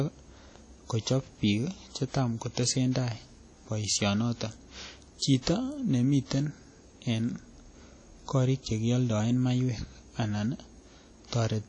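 Throughout, the speech sounds washy and ringing, with a hiss that breathes with the voice and nothing above 10 kHz. The likely cause is WMA compression at a low bitrate, around 32 kbps by the sound: long transform blocks smear quantisation noise and zero weak detail.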